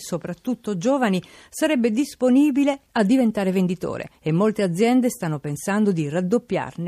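Nothing goes wrong anywhere in this bit of speech, so there's no fault to point to at any moment.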